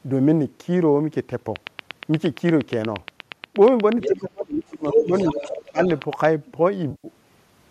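From 1.56 s to 6.26 s, a steady ticking rides over the speech and the gaps alike. There are around forty sharp, near-identical pops, evenly spaced at 8.5 per second, with peaks roughly 10 dB above the speech itself. This is a train of clicks. The regular spacing and unchanging shape point to a repeating electrical pulse, likely interference from nearby equipment or a faulty connection or power supply, rather than anything in the recorded sound.

From about 4.0 s to 6.0 s, a second voice surfaces in fragments: a brief scrap at 4.01 to 4.08 s only a little below the main talker, a longer stretch from 4.89 to 5.63 s at roughly equal level, and a faint trace at 5.84 to 6.0 s. This is the other side's voice leaking through. The far end was playing over a loudspeaker, and the echo canceller likely failed to scrub all of it from the microphone.

Overlapping those leaks, the main speech sinks twice: from 4.07 to 5.13 s, dropping by around 25 dB at its deepest, and again from 5.32 to 5.8 s by around 20 dB. 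This is speech suppressed in double talk. With both parties talking at once, the canceller likely couldn't tell its own talker from the loudspeaker echo, so it ducked everything, taking the near voice down along with the echo.

From 6.91 to 7.08 s, about 130 ms of audio turns smeared and phasey, a blurred patch in place of clean speech. This is AAC frame loss with concealment, and the length fits roughly 13 missing 10 ms frames. The stream is likely low-delay AAC-ELD at 64 kb/s. The decoder patched the gap by reusing the last good spectrum with scrambled or interpolated detail, and that synthetic fill produces the smudged texture.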